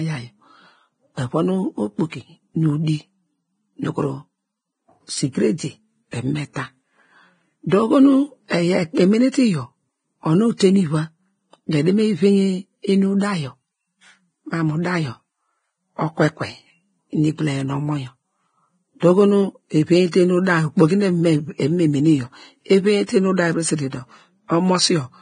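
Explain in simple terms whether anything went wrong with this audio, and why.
Heavy compression, likely by the Vorbis codec, strips everything above about 9.7 kHz and coarsely rounds the treble, so the speech sounds dull, hissy and grainy throughout.

A pre-echo appears from 10.57 to 10.60 s, just before "nu iva": the codec's noise spreads backwards ahead of a sharp sound, adding a brief hiss and softening its start.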